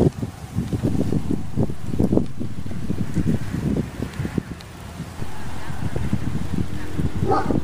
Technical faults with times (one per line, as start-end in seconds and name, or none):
0.88-3.48 DC step
5.20-7.63 DC step